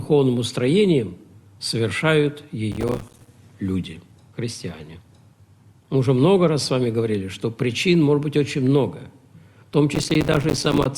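A gritty, tearing crackle rides on the sound from 2.72 to 3.28 s and again, longer, from 9.94 to 10.86 s. Both bursts are processor overload crackle: the processor falls behind and misses dozens of buffer deadlines over a short stretch. Each miss drops in a hard-edged gap of silence, and the spacing of the clicks fits buffers of around 5 ms. The crackle stops as soon as the load eases.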